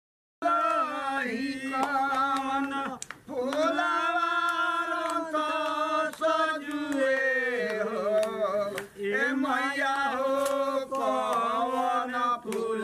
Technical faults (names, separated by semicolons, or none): cut-off start